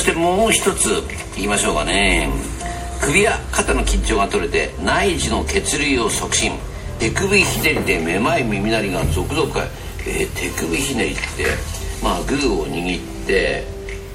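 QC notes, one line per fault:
Throughout: MP3 compression. The top end sounds watery and swirly, with metallic chirps on sibilant and bright transient sounds and softened attacks. This is likely a low-bitrate MP3 encode, consistent with roughly 64 kbps, where weak frequency lines are zeroed and flicker between frames. Unlike a plain low-pass filter, the faint detail in the upper band keeps shifting over time, which gives the swirl.
6.99 s and 11.95 s: compressed frames skipped. At each point the audio jumps forward by about a tenth of a second. The jump is roughly four frames of about 26.1 ms, which fits MP3's 1152-sample frame. The join is a brief smeared blip rather than a sharp click, because neighbouring frames overlap at the splice. That overlap separates it from a sample-level dropout or a buffer glitch, and the lost time, rather than a pause, separates it from a mute or gap.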